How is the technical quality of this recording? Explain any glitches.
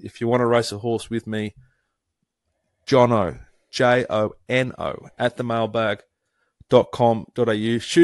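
The recording is clearly compressed, and the damage is easy to hear from start to finish. It sounds like Bluetooth LC3 compression. The speech has a breathy, grainy edge, with the upper frequencies sounding smeared and noisy rather than crisp. That's likely LC3 running fairly lean, something around 48 kbps with 10 ms frames. At that rate the encoder throws away much of the high-frequency detail and patches the gaps with shaped noise, which is where the hiss-like texture comes from.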